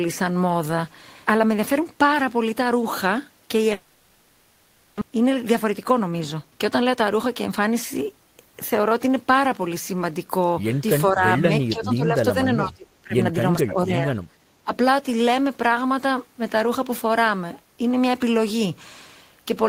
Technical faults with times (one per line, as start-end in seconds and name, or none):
3.73-5.03 long network dropout
5.11-7.61 jitter buffer speed-up
11.11-13.15 speech suppressed in double talk
13.58-14.19 speech suppressed in double talk
14.64-14.72 speech suppressed in double talk